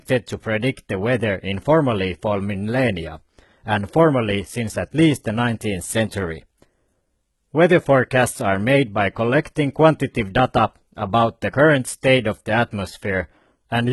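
Speech, affected throughout by low-bitrate audio saved at a high bitrate: nothing is present above 11.8 kHz, and coarse low-bitrate artefacts persist despite the high-rate MP3 file. The likely cause is an earlier encode around 16 kbit/s, fitting HE-AAC, whose losses cannot be restored by re-encoding.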